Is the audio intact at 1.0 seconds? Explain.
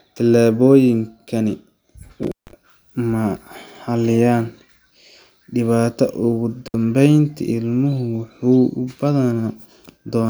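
Yes, the speech at 1.0 s is intact, with no dropout, click, distortion or other fault at that moment.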